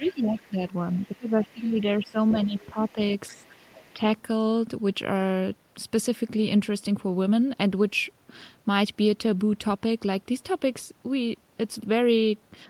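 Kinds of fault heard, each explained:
Speech suppressed in double talk: when both ends talk together, the echo canceller likely cannot tell the near talker from loudspeaker echo and pulls the whole signal down. Here the talker's speech dips in four places, at 0.00 to 0.59 s, 0.93 to 2.98 s, 3.33 to 3.56 s and 3.93 to 4.03 s, by around 15 dB at worst in the first two and around 10 dB in the later two, with the longest stretch lasting well over a second.
Other side's voice leaking through: the far-end voice played on the loudspeaker is likely not fully removed from the microphone signal, so a faint second voice rides under the talker. It appears from 0.06 to 1.46 s, 1.78 to 2.92 s and 3.29 to 3.93 s, sitting roughly 25 to 30 dB below the main speech, and it overlaps the same spans where the talker is being pushed down.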